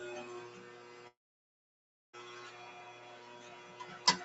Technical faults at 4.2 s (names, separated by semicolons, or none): noise suppressor applied to music or sounds